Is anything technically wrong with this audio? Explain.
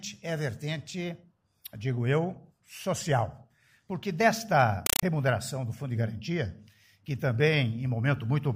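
Yes. From 4.86 to 5.03 s a compressed stream is played as audio: a Dolby Digital (AC-3) bitstream, at a rate that points to about 256 kbps, is read as ordinary samples instead of being decoded. Each frame becomes a 5.33 ms noise burst followed by silence, repeating 31.25 times a second, heard as very loud chattering static. The waveform shows rectangular blocks of noise separated by flat silent runs, and the spectrogram shows broadband vertical stripes filling the whole frequency range.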